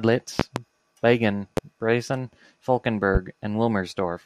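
Between 0.40 and 0.60 s there's a loud pop, a quick double thump around 20 dB above the speech, then single ones at 1.57 and 3.15 s, about 15 dB up. Each is likely a voltage spike from a plug, switch or static, and the speech carries on underneath.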